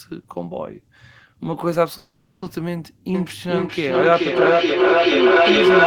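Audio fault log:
1.97–2.44 s, call audio freeze: the speech stops and the last sound carries on as a short buzzy tail that fades out, then sits in silence for about 280 ms before the talker picks up exactly where they left off. Nothing is skipped. Roughly 450 ms has simply been inserted, so everything after runs that much later. That pattern points to packets likely held up in transit, draining the jitter buffer until they finally arrived.
3.14 s to the end, feedback howl: a tone grows out of the speech and keeps climbing rather than dying away, settling around 400 Hz and reaching about 9 dB above the speech level. It throbs at roughly 0.4 s intervals, which is the round-trip time of the loop. Two devices in the same room are on the call, so each pass from loudspeaker back into microphone adds gain. Nobody breaks the loop before the clip ends.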